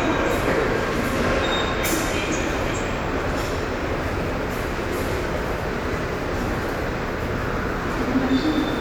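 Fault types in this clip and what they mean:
No technical faults are audible in this recording of everyday sound.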